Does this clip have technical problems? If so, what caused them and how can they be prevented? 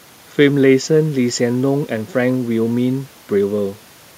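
No, nothing stood out as a technical problem when listening to this speech recording, so there is no cause to trace and nothing to prevent.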